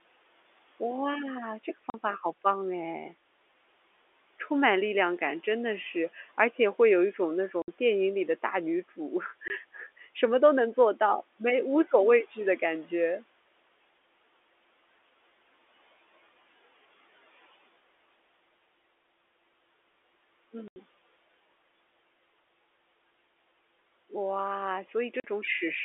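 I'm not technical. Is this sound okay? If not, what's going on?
No. The speech has five short dropouts from packet loss filled with silence, at 1.9–1.94, 7.62–7.68, 9.48–9.5, 20.68–20.76 and 25.2–25.24 s. Chunks of audio went missing in transit and got replaced by dead air, so you hear holes lasting 20 to 80 ms, which fits 20 ms packets.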